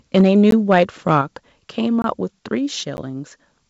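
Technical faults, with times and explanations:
0.15–0.83 s and 1.1–1.15 s, microphone overload: The loudest speech peaks turn harsh and crackly. Their tops are flattened at the converter's limit, about 4 dB over in the first stretch and about 1 dB in the second. A small share of samples is clipped. The likely cause is input volume set too high.
0.21 s and 1.22 s, microphone volume stepped down: The whole level, voice and background alike, drops suddenly in one step. The first drop is about 2 dB, the second about 5 dB. Each follows distorted peaks, so software likely lowered the input volume in response.
0.51 s, 2.02–2.04 s and 2.97 s, block of digital silence: The sound cuts to dead silence and back with no fade. The holes last 15 ms, 21 ms and 11 ms. The last two fit unfilled 1024- and 512-sample buffers.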